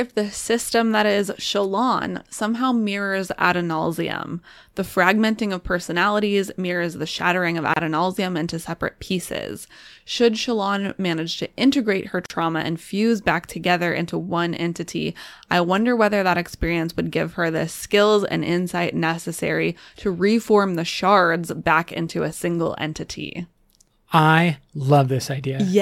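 Throughout the speech the converter's sampling clock wanders by around a microsecond, so samples land slightly early or late. The timing error grows on steep waveform slopes, adding a hiss or roughness roughly 40 dB below the speech that swells with loud, bright sounds and disappears in pauses.

At 7.74 s and 12.26 s, separately encoded pieces were joined untrimmed, leaving each encoder's start-up delay and final-frame padding in place. Continuous sound breaks for 29 ms and then 41 ms, with codec-smeared edges, before resuming exactly where it stopped.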